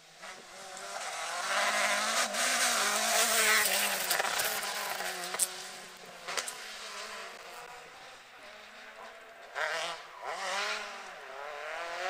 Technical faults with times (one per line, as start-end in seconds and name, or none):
4.30-4.61 processor overload crackle
7.86-8.46 processor overload crackle